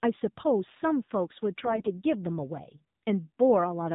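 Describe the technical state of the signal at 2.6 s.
AMR narrowband mobile codec damage is present at 2.6 s, as it is across the entire clip. The speech has passed through an 8 kHz mobile coder that models the vocal tract and excites it with a few pulses per 5 ms subframe, so nothing above 4 kHz survives. The voice sounds muffled, buzzy and synthetic, with plainly audible coding damage that fits a low mode of about 7.4 kbps.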